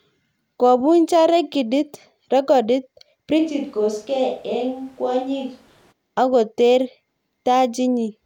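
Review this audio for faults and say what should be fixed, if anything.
From 3.40 to 5.91 s the close mic's signal likely dropped out, causing a switch to a distant microphone: speech turns suddenly roomy, thinner, about 5 dB quieter, with background noise around 30 dB below. Monitor the close mic's feed and secure its cable or transmitter.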